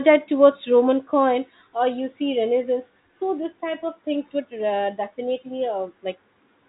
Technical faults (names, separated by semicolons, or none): none